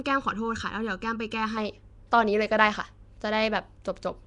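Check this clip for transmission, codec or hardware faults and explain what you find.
Two problems stand out in this speech. Throughout, there's a rough, hissy halo and a smeared, underwater quality, with nothing above 10.6 kHz. That's likely Nellymoser compression, the old Flash mic codec: it codes short blocks on a tight fixed bit budget and fills starved bands with noise, and the damage is plainly audible.

From the start to about 1.57 s there's channel delay (comb filtering). One channel runs under a millisecond behind the other and the two get summed to mono, so whatever they share cancels at evenly spaced frequencies, with the first notch around 700 Hz. It sounds hollow and phasey until that stretch ends.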